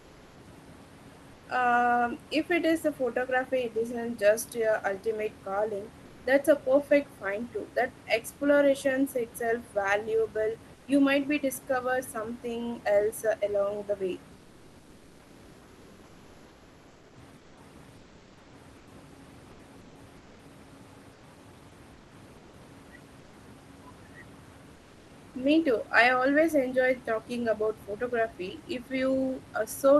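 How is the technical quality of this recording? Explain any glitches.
The recording has comfort noise in place of the background during the pauses. It happens at 0.00–0.35 s, 1.35–1.43 s, 10.75–10.87 s, 24.75–25.07 s, and across about 4.4 s of the gaps between 14.39 and 23.31 s. The likely cause is discontinuous transmission. The sender stops coding during silence, and the receiver fills the gap with synthetic noise. The room's real background gives way to a flat, featureless hiss about 2 to 4 dB quieter. The audio is band-limited near 12 kHz by the call codec.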